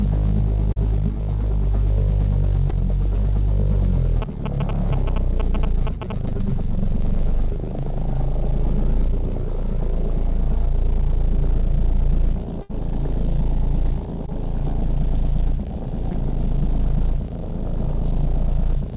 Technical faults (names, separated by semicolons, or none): short concealed packet loss; GSM signalling bursts; burst of packet loss